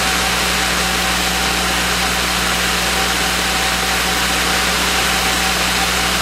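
A steady, raspy buzz runs under the sound from start to finish, sitting around 10 dB below it. This is mains buzz tied to a 60 Hz supply. Something on the path, such as a dimmer, a rectifier or a missing shield, let sharp switching spikes into the signal twice in every mains cycle, 120 times a second. Those spikes carry a ladder of 60 Hz harmonics reaching up to several kilohertz, which gives the buzz its rasp rather than a smooth hum.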